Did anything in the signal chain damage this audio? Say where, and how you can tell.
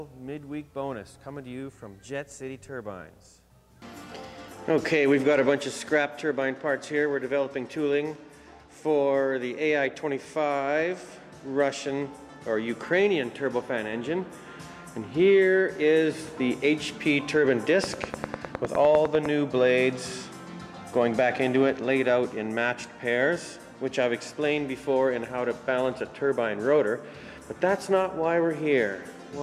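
Yes. A train of clicks runs from 17.84 to 19.27 s: a regular ticking at about 10 clicks per second, roughly fifteen in all, peaking about 15 dB above the sound. It likely comes from the analogue side, such as interference, a faulty connection, or a power supply injecting repeated pulses.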